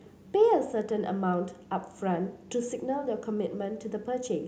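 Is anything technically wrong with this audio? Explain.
Yes, there is an echo leak at the very start, from 0.0 to 0.15 s. A faint, delayed copy of the speech follows the original about 287 ms later, sitting some 25 dB below it, and it is gone after this brief scrap. The likely cause is a far-end loudspeaker whose echo canceller let part of the returned signal through. Unlike room reverberation, which smears into a continuous decay, this is a distinct repeat at a fixed lag.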